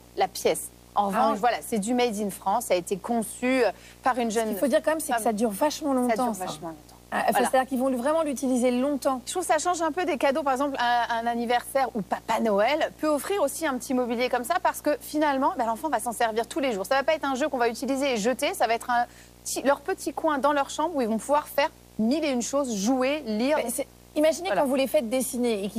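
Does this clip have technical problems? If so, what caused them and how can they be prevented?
Yes: video or display buzz runs throughout, a 59.94 Hz field-rate buzz with harmonic hash plus a 15.7 kHz line tone, roughly 25 dB below the programme. On a spectrogram, this shows as stacked horizontal lines from 59.94 Hz upward and a thin steady line near 15.7 kHz. Keep audio cables away from screens and video leads, and use balanced lines with proper grounding.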